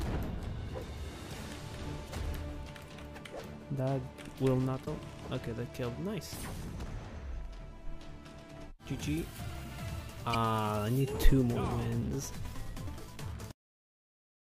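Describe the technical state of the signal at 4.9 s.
Damaged data in a compressed stream occurs from 4.84 to 4.88 s, just before the moment asked. For about 40 ms, corrupted bytes make the decoder misread its frames and lose sync. It hunts for the next valid frame header. The result is a short chirp or blip.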